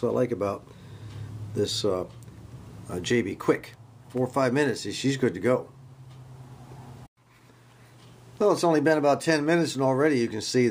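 No technical faults are audible.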